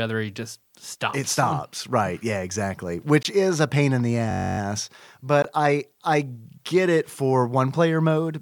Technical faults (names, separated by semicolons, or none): Bluetooth dropout; system hang loop